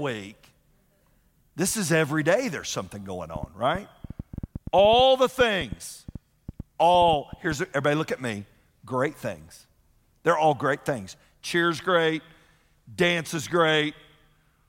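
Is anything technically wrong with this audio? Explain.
Yes. From 3.36 to 7.53 s there is a train of clicks: about thirty irregularly spaced pops at roughly 6.5 per second, ticking over speech and pauses alike. The likely cause is interference or a faulty connection or power supply. Each click appears as a sharp spike in the waveform, peaking around 5 dB above the speech, and as a thin full-height stripe on the spectrogram.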